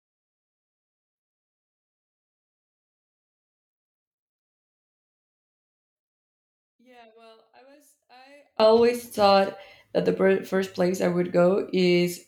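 One channel inverted, from 0.0 to 8.6 s, ending just before "thought that the": the speech falls by about 36 dB to a faint remnant. The likely cause is reversed polarity on one stereo channel, so the centred speech cancels when both channels are summed to mono.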